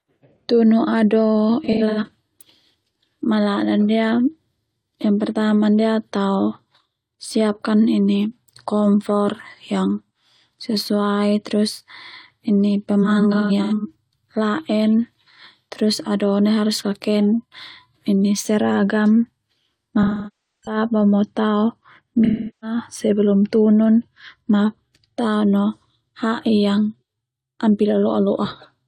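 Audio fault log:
1.64–2.09 s, 13.02–13.96 s, 20.02–20.77 s, 22.24–22.77 s (just before "sebelum tunun"): AAC frame loss with concealment. Missing frames are filled from the last good spectrum, so the speech turns smeared and phasey rather than cutting to silence as a plain dropout would.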